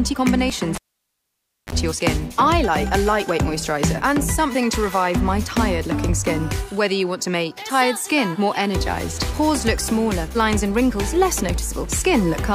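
At 0.75 s a sharp pop gives way to near silence for about 0.93 s, then a brief 32 ms burst of 50 Hz mains buzz and a second pop as the sound returns at 1.73 s: a cable pulled and plugged in while live, buzzing while only the tip touched.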